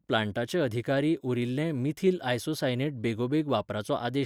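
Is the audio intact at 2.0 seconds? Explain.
Yes, at 2.0 seconds the speech plays through intact, with no fault audible at that moment.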